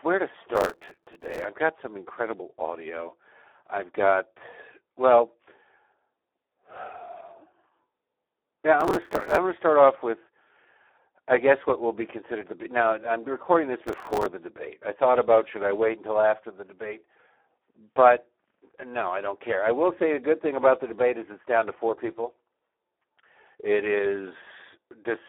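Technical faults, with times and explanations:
Throughout: Speex codec. The speech has the heavy, hoarse and buzzy roughness of a CELP coder starved of excitation bits, consistent with about 8 kbps. It is also confined to a telephone band of 300 Hz to 3.5 kHz. On a spectrogram, energy stops sharply near 3.8 kHz with nothing above it, and the harmonics look smeared and noisy instead of cleanly striped. The waveform keeps its outline but loses fine detail.
0.56–1.45 s, 8.81–9.38 s and 13.87–14.26 s: processor overload crackle. The first burst follows "where to" and ends before "I've got some incredible". The second ends before "gonna start off with". The third falls between "now I'm recording this" and "the debate I thought". In each stretch, many buffers of about 5 ms miss their deadline: roughly seventy in the first, forty in the second and thirty in the third. Each missed slot is filled with stale audio that has hard edges, so the sound tears and crackles until the load clears. 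The waveform shows a run of small repeated blocks with abrupt steps between them. The spectrogram shows dense vertical clicks spanning the band over each range.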